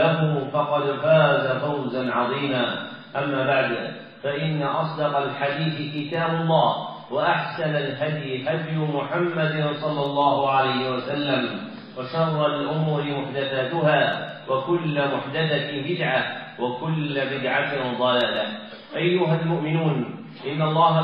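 No technical fault is audible anywhere in this recording.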